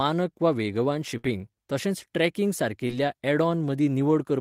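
Right after "वा वेगवान", at 1.17 s, a burst of packet loss interrupts the speech. About 60 ms is filled by the receiver stretching the last sound and fading it down, so a held, decaying sound replaces the real audio until 1.25 s, and about 60 ms of speech never returns. On a spectrogram the last sound's pattern holds steady and dims toward the end.

From 1.25 to 1.31 s the audio comes back through lost packets rebuilt from error correction. These 40 ms are played from the low-bitrate copies carried by the following packets, which suggests two frames were reconstructed. They sound rougher and noisier than what follows. A spectrogram shows blurred, grainier detail before full detail resumes.

At 2.87 s a short concealed packet loss leaves about 20 ms missing. The decoder extends the preceding sound for about 16 ms and crossfades back, giving a brief smear or wobble. From 2.89 to 2.91 s, 20 ms is again rebuilt from the error-correction copy, which points to a single recovered frame. 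The spectrogram shows a narrow blurred strip.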